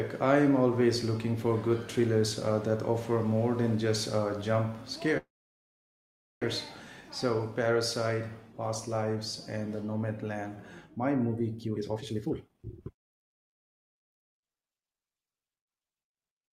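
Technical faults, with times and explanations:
5.17 to 6.44 s, call audio freeze: the sound stops with a short fading buzz, then about 1.16 s of silence before resuming exactly where it left off, with nothing lost. This was likely delayed packets emptying the jitter buffer, adding 1.24 s of delay.
11.63 to 14.98 s, jitter buffer speed-up: the speech sounds hurried, running at 137% of normal speed with its pitch unchanged. With surplus audio queued, the receiver repeatedly cut out short pitch-period slices, trimming about one and a half seconds to reduce the delay.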